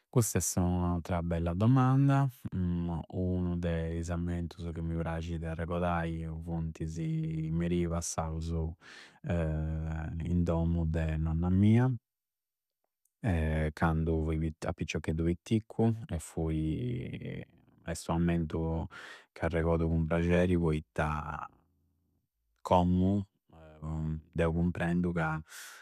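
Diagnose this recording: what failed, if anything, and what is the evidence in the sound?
Listening to the speech recording, nothing stood out as a failure at any stage.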